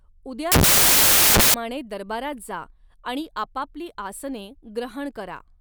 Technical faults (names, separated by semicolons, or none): samples built from the wrong bytes